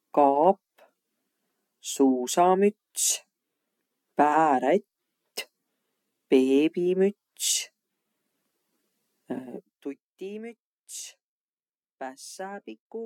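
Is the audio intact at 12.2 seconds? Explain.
Yes, at 12.2 seconds the speech is intact, with no fault heard at that moment.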